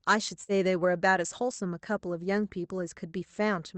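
At 0.43 to 0.52 s, a burst of packet loss: about 55 ms of the last sound is held and faded, then audio resumes 60 ms later, unlike a clean silent dropout.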